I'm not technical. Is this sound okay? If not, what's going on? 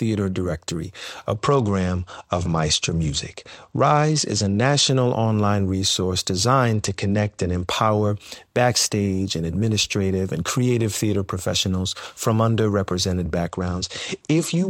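No. The speech loses quality three times, from 1.35 to 4.89 s, from 6.73 to 7.67 s, and from 13.48 s to the end. Each time it sounds duller, as if the top end were muffled, with a gritty, sandy noise over the voice. This is a Bluetooth SBC bit pool drop: the wireless link got crowded, so the phone sent the sound with far less detail. The crisp high sounds are dropped and the rest is stored coarsely until the connection recovers.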